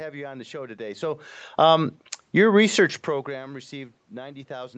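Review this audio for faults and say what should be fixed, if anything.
Nothing stood out on listening, so there is nothing here that needs fixing.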